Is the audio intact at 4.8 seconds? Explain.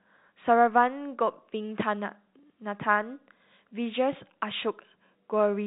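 Yes, the audio is intact at 4.8 seconds, with the speech passing through G.711 telephone coding as expected, band-limited to nothing above about 3.8 kHz.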